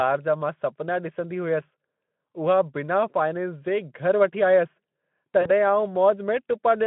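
At 5.41 s the speech smears into a stretched, buzzy tone or coloured noise that fades, leaving the sound weak or distorted until about 5.51 s. This is VoIP packet loss concealed by the speech codec: 40 ms went missing, which fits two lost 20 ms frames, and the Speex decoder bridged the gap by extrapolating its last pitch and filter at falling gain.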